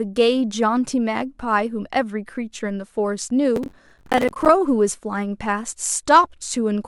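From 3.56 s to 4.49 s, a burst of processor overload crackle rides on the speech. The processor fell behind and missed its deadlines for small audio buffers, which sound to be around 10 ms each. Around 40 were missed, again and again over this stretch. Each miss replayed a scrap of old audio with hard edges. Strung together, these scraps make a gritty, tearing crackle. It stops once the load clears at 4.49 s.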